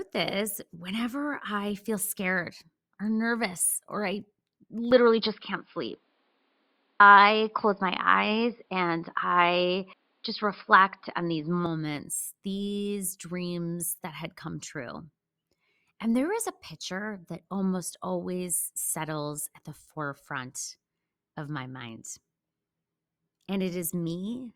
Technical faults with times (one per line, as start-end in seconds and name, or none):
4.91-11.66 input switched to a poorer device